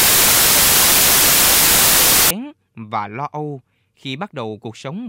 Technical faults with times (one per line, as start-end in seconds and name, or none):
0.00-2.31 samples built from the wrong bytes